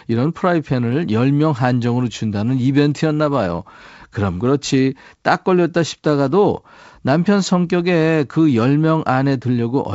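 No technical faults can be heard in this speech.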